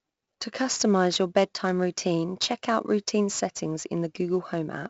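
Throughout, a gritty hiss rides on every loud syllable, sharp attacks crunch, and nothing sounds above 7.7 kHz. This is heavy 4-bit ADPCM compression, consistent with a 64 kbps stream.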